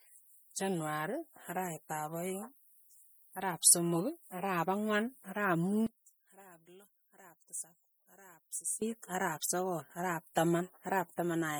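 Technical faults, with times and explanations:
Throughout, MP3 compression: the speech has a plainly audible watery, swirling quality, likely from lossy coding at a low bitrate that fits about 48 kbps. Weak frequency lines drop in and out between frames, appearing on a spectrogram as flickering holes and smeared onsets, with nothing above 21 kHz.
5.87 to 8.82 s, one channel inverted: after "ang'wan ara'ap" the level falls by about 17 dB until "ara'ap sogol ara'ap", likely because one channel's polarity is flipped and the shared centre cancels in mono. The waveform shrinks sharply, and the spectrogram dims across the band, leaving a faint residue.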